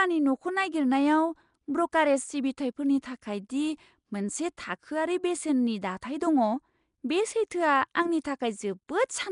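From start to finish the speech carries a rough, hissy halo and a smeared, underwater quality. The likely cause is Nellymoser compression, the old Flash microphone codec. It codes short blocks with a fixed, small bit budget, so weaker bands get no bits and are filled with noise. The damage is plainly audible and fits a rate of around 44 kbps.

At 8.87 s a brief hiss runs ahead of a sharp attack, and the onset itself sounds softened and smeared. This is pre-echo, spread over about 17 ms before the attack. The transform codec spreads its quantisation noise evenly across a whole block. Because the attack lands late in that block, noise sized for the loud moment also fills the quiet gap just before it.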